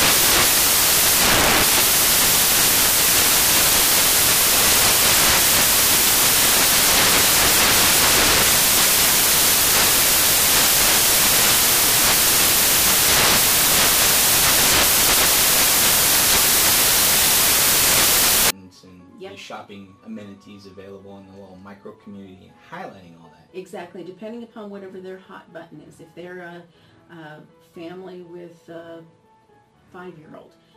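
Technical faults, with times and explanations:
0.0–18.5 s, samples built from the wrong bytes: the audio becomes loud, harsh broadband noise because each sample's bytes are misassembled, shifted by a byte or in swapped order, so the rapidly varying low-order bits land in the high-order position.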